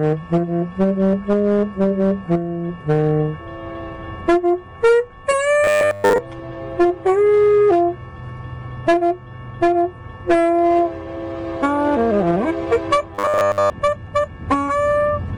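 A recording of everyday sounds with robotic sound from repeated short buffers, from 5.64 to 6.18 s and from 13.15 to 13.70 s. Each stretch becomes a rigid metallic buzz at 100 Hz. It is likely a 10 ms buffer looped over and over while the real audio was skipped.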